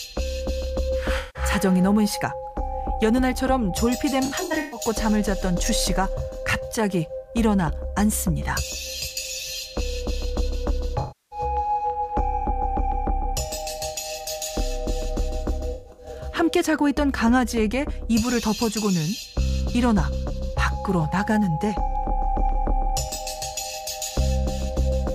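Four patches of AAC frame loss with concealment turn up, at 1.18–1.43 s, 4.25–4.80 s, 10.99–11.39 s and 15.73–16.15 s. Each time the decoder lost frames and papered over the gap by reusing the last good spectrum, so you get a smeared, noisy, phasey stretch instead of a hard dropout. The first and third are single blocks of about 170 ms and 320 ms. The second and fourth are broken up, with losses scattered over roughly 470 ms and 430 ms and the longest run around 150 ms.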